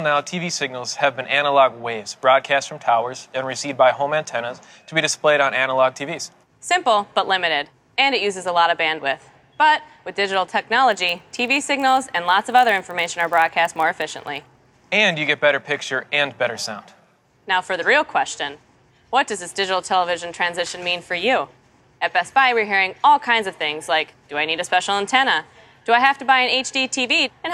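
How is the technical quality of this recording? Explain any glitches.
The recording has one glitch. From 10.90 to 14.69 s a regular buzz at about 46.9 Hz rides on the sound, rising and falling with its level. This comes from a filter restarted on every block: it loses its state each time, which fits a 1024-sample block, and starts from silence, so each block opens with a small transient.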